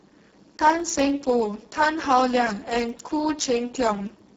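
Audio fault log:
throughout Speex codec: the encoder runs near its lowest quality, which fits roughly 6 kbps, starving the excitation, so speech sounds hoarse and noisy.
0.10 to 4.29 s periodic USB or driver dropouts: the driver stalls every 0.1 s and skips a tiny fraction of a millisecond, leaving regular ticks wherever signal is present.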